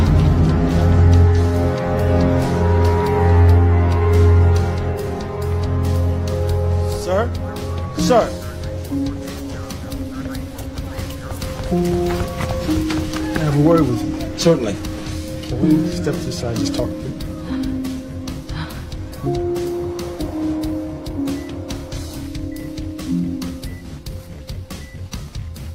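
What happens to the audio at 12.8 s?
Nothing goes wrong at 12.8 s; the audio runs through that point intact, with no dropout, click, distortion or other fault.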